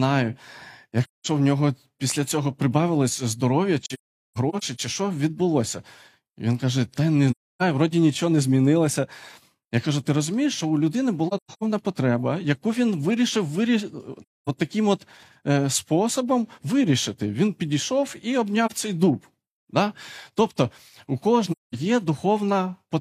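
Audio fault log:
1.04–1.27, 3.83–4.80, 7.30–7.62, 11.28–11.64, 14.22–14.49, 18.66–18.72, 21.51–21.75 s: AAC frame loss with muting. Each lost frame of about 43 ms decodes as silence, and the overlapping windows fade the sound out and back in. The 18.66 s loss is a brief dip. The others are soft-edged holes of about 0.2–0.3 s, except the 3.83 and 11.28 s ones, which are scattered and broken up: about 0.6 s lost over 0.94 s, and about 0.26 s lost over 0.34 s. On a spectrogram these show as blank full-band columns with tapered edges. The waveform envelope fades to nothing and back.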